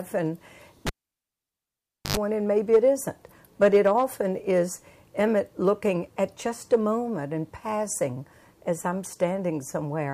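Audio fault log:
0.87–2.17 s, cable pulled and plugged in: A pop as the live lead breaks contact. Then 1.25 s of near silence. On reinsertion, the tip touches alone for 93 ms, giving a 50 Hz mains buzz. A second pop marks the sound returning.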